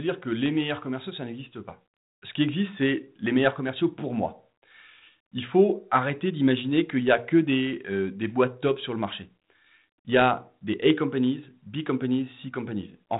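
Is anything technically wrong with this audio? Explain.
No, nothing in this speech stood out as a technical problem on listening.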